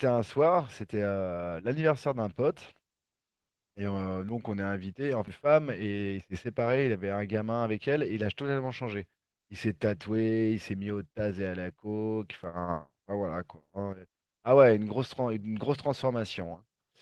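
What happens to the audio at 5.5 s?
The speech briefly runs hurried, about 9% faster at unchanged pitch, from 5.45 to 6.20 s: a jitter buffer speed-up, cutting roughly 70 ms of pitch periods to drain excess delay.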